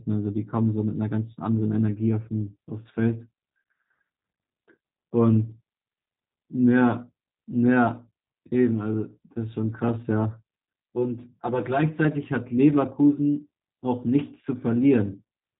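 From start to finish the speech carries G.729 codec damage, and it's plainly audible. Everything is rebuilt from a filter, a pitch predictor and a few pulses per frame, which fits 8 kbit/s G.729A. It sounds rough and slightly synthetic, with nothing above 3.8 kHz.

From 10.72 to 12.04 s there's channel delay (comb filtering). One channel arrives around 5 ms late and gets summed with the other, so shared content cancels at evenly spaced notches starting near 100 Hz. That stretch turns hollow and phasey.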